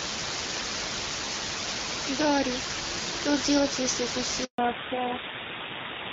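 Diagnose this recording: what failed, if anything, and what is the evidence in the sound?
Sample-format conversion has failed: a steady, even hiss runs through the whole recording, nearly as loud as the speech itself. This is low bit depth with dither. The signal was requantised to very few levels, which points to about three bits, and dither turned the rounding error into flat white noise. Without dither, the same truncation would cause gritty distortion that follows the speech's loudness. Here the noise stays constant and the speech stays clean underneath it.

In the network, a handover gap from 4.44 s to 4.58 s cuts the speech. It fades out within a few tens of milliseconds and leaves 140 ms of silence while the call moves between networks and no speech frames arrive. A packet-loss dropout is usually shorter and scattered, or patched over by concealment. This gap is a single clean hole, and the codec changes immediately after it.

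At the codec stage, a fallback to narrowband begins at 4.58 s, right after the gap, and lasts until the end. Before the handover, the wideband HD Voice codec can be heard at 12.65 kbit/s with light coding damage. After it, nothing above 4 kHz remains, and the speech sounds duller and rougher. That fits a low-rate AMR-NB mode such as 7.4 kbit/s. A plain low-pass filter would only dull the sound. The added roughness here comes from narrowband coding.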